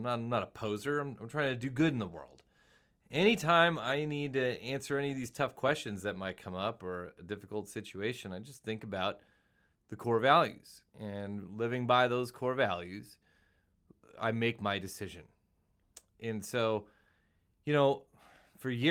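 No technical faults can be heard anywhere in the speech.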